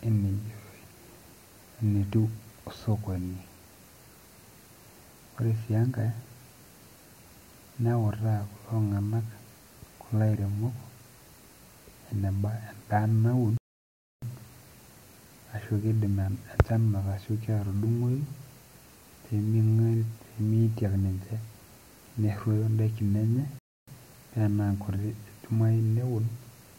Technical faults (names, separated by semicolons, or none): playback stall